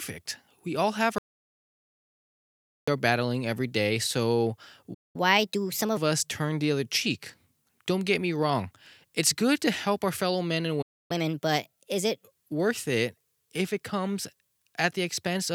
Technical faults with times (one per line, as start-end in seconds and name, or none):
1.18-2.88 audio dropout to silence
4.94-5.16 playback stall
5.16-5.97 catch-up at higher speed
10.81-11.11 playback stall
11.11-12.23 catch-up at higher speed